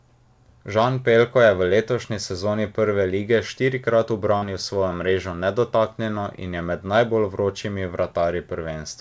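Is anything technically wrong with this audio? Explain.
Yes, there's one short concealed packet loss at 4.38 to 4.44 s, right after "lige štirikrat" and before "svojo mrežo nedotaknjeno in". About 40 ms of audio never arrived in time, so the receiver extended the preceding sound to cover the gap and then crossfaded back, leaving a quick smeared wobble. The call path's band limit is audible too, with nothing above 8 kHz, which fits a G.722 wideband codec.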